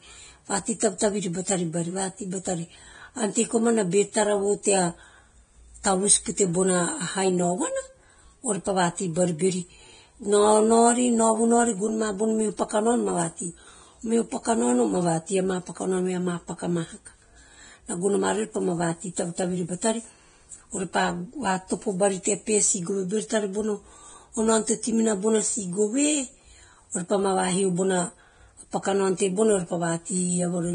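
Across the whole recording the speech sounds hissy and grainy, with roughened tones and softened consonant onsets, and nothing at all above about 9.7 kHz. The likely cause is heavy Vorbis compression, with damage that fits a bitrate somewhere in the low twenties of kbps. At that rate the encoder trims the top band and quantises the remaining treble so coarsely that fine detail turns into noise.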